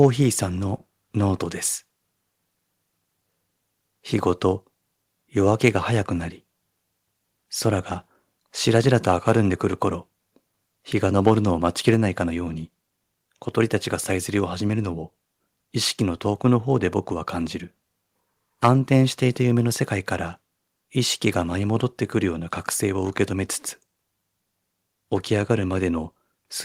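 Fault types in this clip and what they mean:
Microphone overload: three short bursts of harsh, crackling distortion at 0.00–0.06 s, 11.26–11.32 s and 18.64–18.69 s, each on a loud peak, with the tops flattened about 2, 3 and 4 dB past the converter's limit across a small share of samples. The likely cause is input gain set too high at the converter. Unlike codec artefacts, the grit sits only on the loudest instants and never touches quieter passages.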